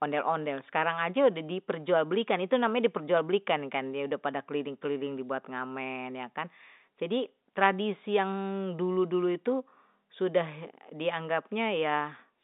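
No technical faults turn up anywhere in this speech clip, so there is nothing to describe in time order.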